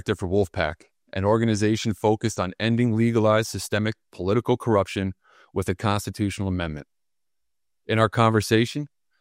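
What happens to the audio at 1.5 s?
Nothing goes wrong at 1.5 s: the audio runs through that moment intact, with no dropout, glitch or other fault to be heard.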